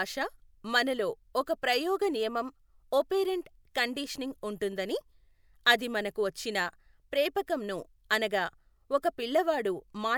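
Nothing here to flag: no dropouts, glitches or distortion turn up anywhere in this bit of speech.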